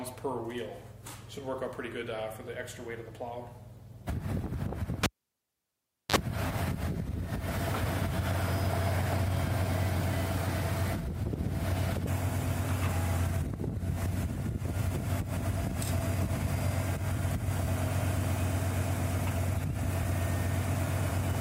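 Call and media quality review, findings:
Cable pulled and plugged in, 5.03 to 6.16 s. A pop, then about 1.08 s of near silence as the live cable leaves the jack. A 44 ms burst of 50 Hz mains buzz as only the tip touches, then a second pop when full contact restores the signal. Probable component: input connector or cable at the capture end.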